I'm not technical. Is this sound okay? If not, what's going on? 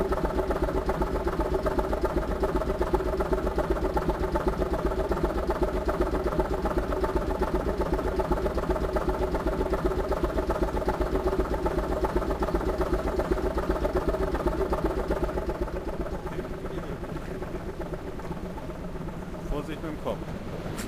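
No. Sample clock jitter runs throughout: the recorder's timing wobbles, taking samples slightly off-beat, adding a hiss that grows with loud, bright sounds.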